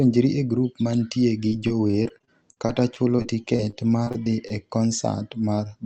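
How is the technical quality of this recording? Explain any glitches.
The quality takes a hit in the middle from repeated packet loss. From 1.49 to 4.52 s, right after "e grup mantie gi", 21 short dropouts, none longer than roughly 44 ms, get patched by stretching the previous sound. That makes the speech choppy and robotic. It's all riding an Opus-style call path with the top end capped around 8 kHz.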